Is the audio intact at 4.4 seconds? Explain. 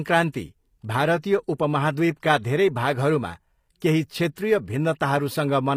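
No. Just before 4.4 s, at 4.35 s, there is pre-echo lasting about 17 ms. Codec noise spread across the block leaks ahead of a sharp attack as brief hiss, softening it. Throughout, the speech sounds gritty and lispy in the treble, with nothing above 15.4 kHz. The likely cause is HE-AAC compression, which fits a low bitrate near 24 kbps.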